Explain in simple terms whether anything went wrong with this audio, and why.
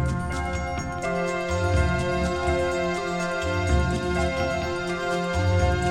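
Nothing went wrong with this recording, as far as a careful listen can tell. There are no dropouts, glitches or other problems anywhere in the sound.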